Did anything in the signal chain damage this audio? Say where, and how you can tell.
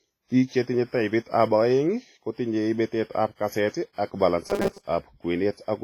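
Yes. At the codec stage, the speech rings and washes throughout, with breathing hiss. Heavy WMA compression is the likely cause, which fits about 24 kbps.

At the driver or buffer stage, from 4.47 to 4.88 s, just after "ab kaseet ak", a metallic 200 Hz buzz appears. This is robotic sound from repeated short buffers. Roughly half the audio is likely replaced by repeats of one 5 ms chunk.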